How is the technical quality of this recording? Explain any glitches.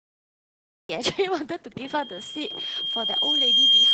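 The technical quality is poor: the speech is heavily compressed throughout, the recording begins abruptly, and a feedback squeal takes over the second half.

Opus voice compression affects the whole clip. The speech-oriented SILK coder models the voice with linear prediction and codes its excitation coarsely, so the voice sounds hoarse, muffled and slightly robotic, with nothing above 9.3 kHz. The heaviness of the damage points to a bitrate around 10 kbps. Unlike a simple low-pass filter, it also leaves this grainy, synthetic texture.

A cut-off start is heard at 0.89 s, where digital silence gives way directly to speech already in progress. The capture began late, so there is no attack or breath leading in. This differs from a dropout because nothing precedes it; the sound simply begins mid-utterance.

A loudspeaker feedback squeal begins at 1.84 s and lasts to the end. The microphone was picking up its own loudspeaker, and at 3.2 kHz the loop gain exceeded one. 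That single tone swells over roughly two seconds until it sits well above the speech. Its steady rise sets it apart from a constant whine or hum.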